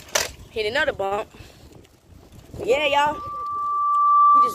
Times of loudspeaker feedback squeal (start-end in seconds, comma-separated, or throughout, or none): 2.70-4.54